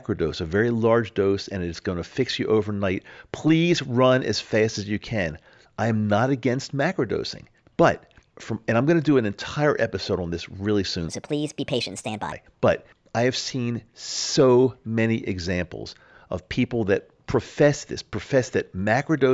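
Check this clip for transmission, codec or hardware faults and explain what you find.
One fault is present, a wrong sample rate. From 11.09 to 12.32 s, just after "on this really soon", the speech jumps about 5.6 semitones higher and runs 1.38 times faster. The samples are played back without conversion at a higher rate than they were captured, which fits 16 kHz audio played at 22 kHz.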